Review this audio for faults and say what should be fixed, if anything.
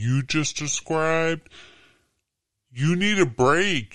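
Wrong sample rate throughout: the speech runs at about 0.73 speed and about 5.5 semitones low, which fits 44.1 kHz audio played at 32 kHz. On a spectrogram, harmonics sit lower and syllables look stretched. Fix it by resampling properly or tagging the file's true rate so playback matches the recording.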